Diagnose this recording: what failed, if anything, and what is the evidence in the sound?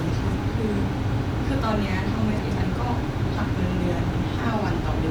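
The network stage reordered frames. Around 2.38 to 2.64 s, and again at 4.05 to 4.24 s, the speech goes into a brief garbled flutter. Neighbouring blocks of about 128 ms and 96 ms play swapped, and no time is lost.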